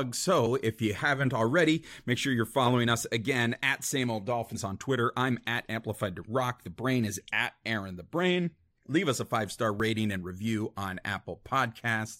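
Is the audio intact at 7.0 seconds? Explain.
Yes, at 7.0 seconds the speech plays through cleanly, with no dropout, click, distortion or other fault at that moment.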